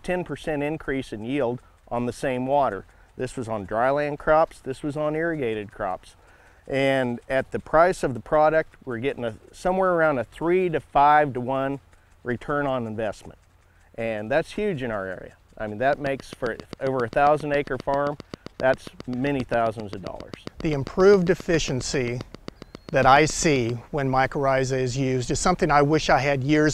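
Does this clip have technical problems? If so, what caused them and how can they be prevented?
Yes. From 15.93 s to 23.70 s a train of clicks ticks over the audio at a steady 7.47 per second, about fifty near-identical pulses rising a little above the sound and audible in pauses too. The likely cause is interference from nearby equipment or a faulty connection or power supply injecting pulses. Unlike random crackle or one-off dropouts, these repeat with matching shape at an even pace. Prevention: keep noisy equipment away from the interface and use shielded cables.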